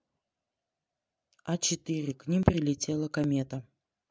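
At 2.43 s and again at 3.24 s the speech jumps forward, with no gap of silence: a dropped buffer (overrun) is the likely cause. Samples went unread and were overwritten, so roughly 20 ms and then only a few milliseconds are missing.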